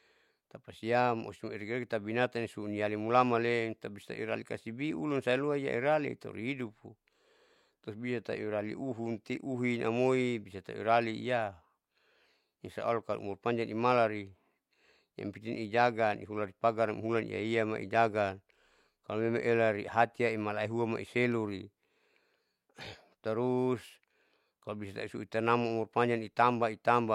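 No technical faults can be heard anywhere in the recording; the signal stays steady and intact throughout.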